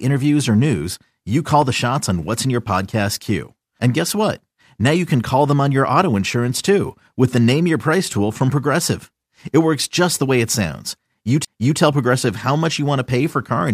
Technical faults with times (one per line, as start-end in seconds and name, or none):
1.62-1.64 loud pop
11.45-11.47 CD skip